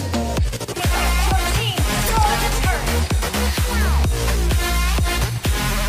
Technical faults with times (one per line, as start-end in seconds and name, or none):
2.05-2.10 damaged data in a compressed stream